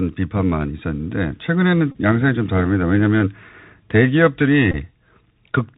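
A speech clip carried over a Bluetooth CVSD headset codec: the link's one-bit delta modulation at 64 kHz passes nothing above 4 kHz, so the speech is plainly narrowband, s sounds come through scratchy, and a granular hiss sits beneath the speech throughout. Bluetooth headset packet repeats follow where lost voice packets were replaced by decoding the previous packet again, giving a brief steady buzz near 267 Hz from 1.92 to 1.97 s (about 30 ms lost, consistent with eight 3.75 ms packets) and again from 4.71 to 4.76 s (about 18.8 ms, consistent with five packets).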